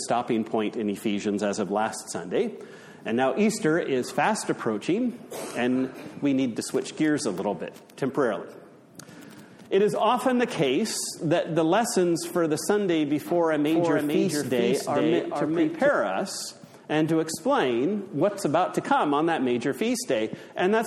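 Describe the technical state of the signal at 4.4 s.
At 4.4 s the signal is intact, with no audible dropout, distortion, glitch or other technical fault.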